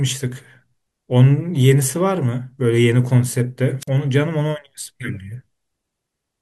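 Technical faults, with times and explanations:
3.80 to 3.88 s, wireless microphone squelch dropout: the radio link from the analogue FM microphone weakened until the receiver's squelch shut the output, so the speech gives way to a short burst of hiss, then about 45 ms of near silence, before it returns.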